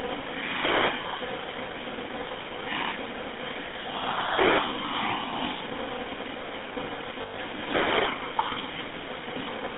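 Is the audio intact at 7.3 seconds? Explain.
No. The moment falls within a burst of lost GSM frames spanning 7.22 to 7.39 s. About 140 ms of audio is missing, scattered across 160 ms, which points to roughly seven dropped 20 ms frames. The longest unbroken gap is around a tenth of a second. The decoder covers each gap by reusing the last good frame's filter and excitation settings. The result is a held, rough, metallic ring in place of the real signal.

Underneath this, the whole clip passes through the GSM full-rate codec, consistent with a 13 kbps stream. The codec models the vocal tract and excites it with a regular pulse train that keeps only one excitation sample in three. That coarse excitation gives the speech a plainly audible buzzy, gravelly roughness. The line band runs from about 300 Hz to 3.6 kHz, so the sound is thin and lacks bass and upper treble at 7.3 s as everywhere else.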